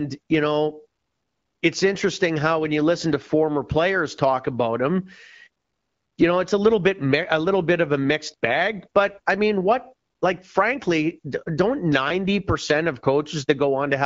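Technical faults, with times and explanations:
No technical faults detected.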